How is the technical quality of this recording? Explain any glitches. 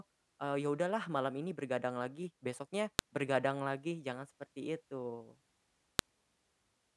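There's a recurring glitch: a file header played as audio, heard as a sharp snap at 2.99 s and again at 5.99 s. The speech seems to have been joined from 3-second WAV pieces without stripping each header, so those few bytes play as a loud click at every join.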